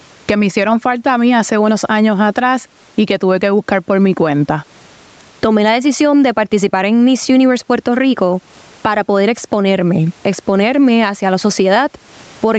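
Gain pumping runs through the whole speech recording. The level breathes, swinging by something like 15 dB, with the room noise sitting about 43 dB below the speech. Loud and quiet passages end up squeezed close together and sound squashed. The likely cause is input gain set far too high for the microphone, with a fast limiter or compressor clamping down on every loud moment.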